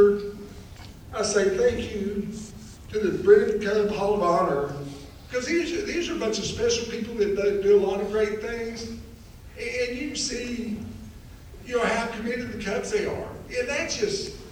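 Nothing technical stands out here; the audio runs along without a single hitch worth pointing to.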